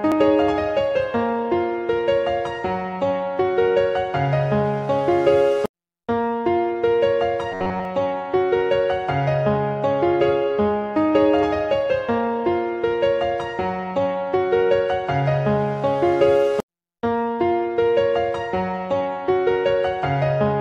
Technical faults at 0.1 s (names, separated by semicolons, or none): none